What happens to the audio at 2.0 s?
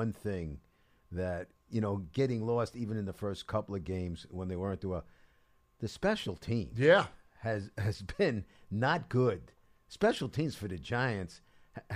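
At 2.04 s the speech jumps forward, with no gap of silence in between. That's most likely a dropped buffer (overrun): the software didn't pull a chunk of samples off the hardware in time, so it got overwritten, and the audio on either side was spliced straight together. Around 10 ms went missing, which is short enough to register as a small skip rather than a lost syllable.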